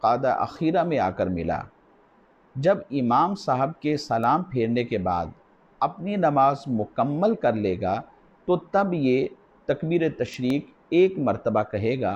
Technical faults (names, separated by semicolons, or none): sample clock jitter; bit error spike; loud pop